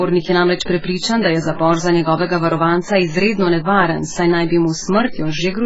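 From start to finish the speech carries heavy AAC compression, likely at a very low bitrate, which fits something around 12 kbps. Nothing survives above 7.6 kHz, so it sounds dull, and the coarse quantising smears the sibilants and sustained sounds into a warbly, fizzy texture.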